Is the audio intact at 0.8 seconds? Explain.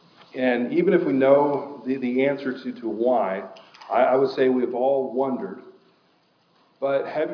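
Yes, at 0.8 seconds the audio is intact, with nothing interrupting or distorting the sound at that moment.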